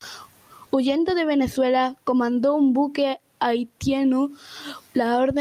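Nothing stood out on listening to this speech recording.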